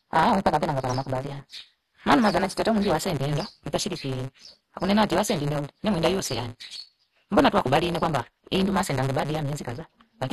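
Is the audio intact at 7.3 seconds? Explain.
No. At 7.3 seconds, as throughout, a block size mismatch (truncated) drops each block's tail, leaving a 138 Hz buzz and speech running 1.6 times fast at normal pitch, consistent with 512-sample written blocks; the waveform shows regular splices. The sound is also dull and gurgling, likely from MP2 compression, with the spectrogram empty above about 12.2 kHz and upper bands flickering.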